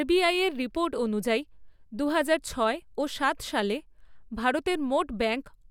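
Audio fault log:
No fault is heard in this speech clip. Nothing in the audio calls for an entry in this log.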